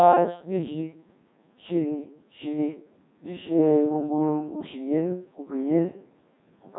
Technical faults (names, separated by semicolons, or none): Codec 2 vocoder